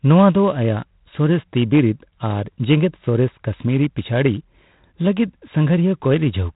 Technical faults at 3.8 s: G.726 ADPCM

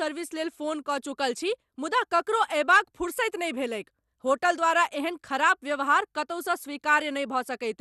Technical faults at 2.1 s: MP2 compression

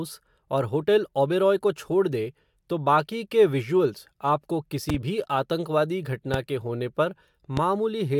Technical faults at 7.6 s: loud pop

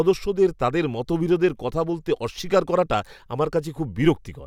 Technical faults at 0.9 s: none

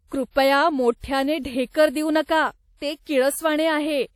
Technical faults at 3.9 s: WMA compression

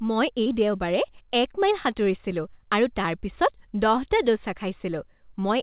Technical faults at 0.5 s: short concealed packet loss

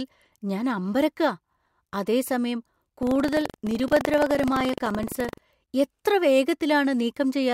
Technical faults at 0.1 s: none

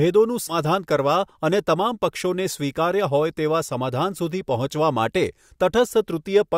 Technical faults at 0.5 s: compressed frames skipped

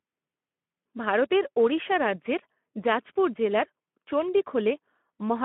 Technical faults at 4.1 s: Speex codec

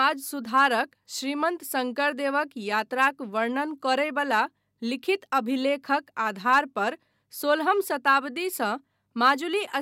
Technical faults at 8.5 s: none

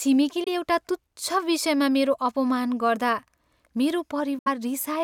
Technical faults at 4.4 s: Bluetooth dropout

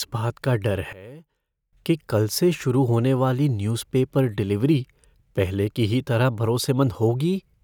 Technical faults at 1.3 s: one channel inverted

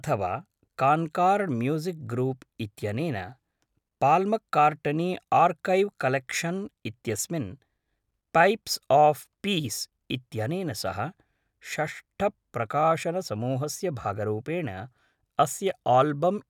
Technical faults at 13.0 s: none

